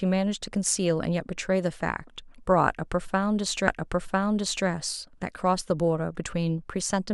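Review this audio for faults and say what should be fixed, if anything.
A stream segment repeated at 3.67 s. The stretch up to 4.67 s plays a second time, adding one second to the speech. A small blip marks the jump back. The player fetched or queued that segment twice. Track segment sequence numbers and discard duplicates before playback.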